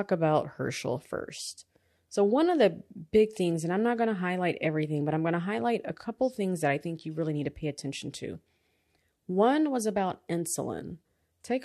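No technical faults are audible.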